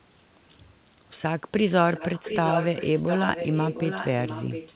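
From 1.92 s to the end of the speech, a delayed copy of the voice trails behind it. This is an echo leak. The copy arrives about 0.71 s late and sits roughly ten decibels under the direct speech. The likely cause is a far end on loudspeaker whose echo canceller missed part of what its microphone caught, so that residue returned down the line. It shares the narrowband sound of the call, with nothing above 4 kHz.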